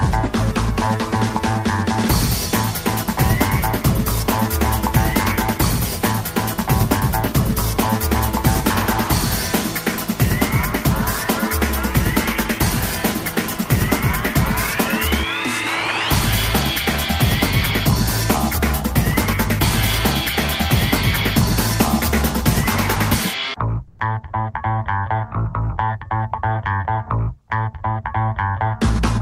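The audio likely passes through a sender using discontinuous transmission, as in Opus DTX, which leaves the receiver to synthesise comfort noise in place of the background. From 23.87 to 23.99 s (120 ms), the real background, about 45 dB below the loudest sound, becomes a flat, featureless hiss about 11 dB different in level.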